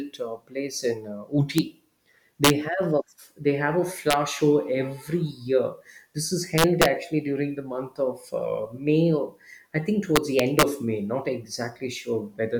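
Integer overflow cracks hit the speech at 1.58 s, 2.44–2.50 s, 4.11–4.13 s, 6.58–6.85 s and 10.16–10.63 s. Peaks reaching up to about 4 dB past full scale wrap to the opposite sign instead of limiting, producing violent, harsh cracks far sharper than clipping.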